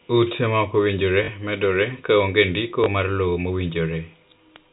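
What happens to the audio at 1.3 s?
Just before that point, from 1.24 to 1.28 s, there is packet loss with the last packet repeated. About 40 ms of the speech is missing, which fits two lost 20 ms packets. The receiver replays the last packet to fill the hole, and the speech gives a brief robotic stutter.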